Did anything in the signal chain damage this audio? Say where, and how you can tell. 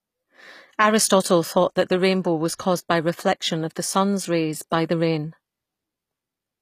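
Yes, at the codec stage, and it runs through the whole speech clip. The treble stays bright yet sounds synthetic: sibilants come out gritty and metallic, and nothing reaches above 15.5 kHz. That points to HE-AAC compression as the likely cause, at a low rate that fits roughly 24 kbps. The upper band is regenerated by copying lower spectrum upward under a coarse envelope, so its harmonics fail to line up with the real ones below. A plain low-pass filter would dull the top instead.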